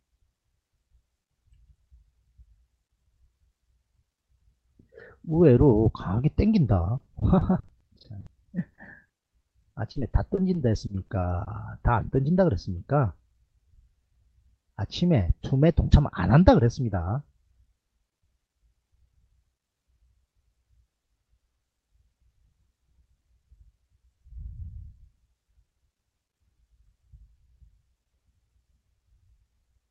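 From 6.97 to 11.49 s, repeated packet loss (robotic sound) sets in. About 30 short gaps, longest 60 ms, get patched by stretching prior audio, leaving choppy fragments.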